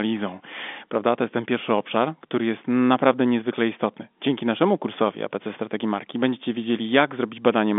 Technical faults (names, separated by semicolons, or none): none